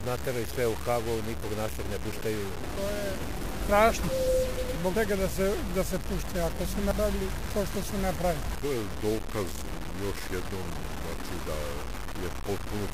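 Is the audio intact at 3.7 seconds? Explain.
No. At 3.67 s there is a dropped buffer, most likely an overrun. A short stretch of sound, roughly a tenth of a second, is missing. The audio on either side is joined directly, with no gap of silence. The program failed to collect its samples before the hardware wrote over them. That piece never reached the recording. You hear the sound jump forward.

The moment is also affected by low bit depth without dither, which runs through the whole clip. The sound is grainy and distorted. The error tracks the signal, so the grit changes as the sound changes. The coarseness fits a 5-bit signal, likely truncated rather than rounded, with no dither added. The distortion sits only about 10 dB below the signal. Quieter parts turn rough.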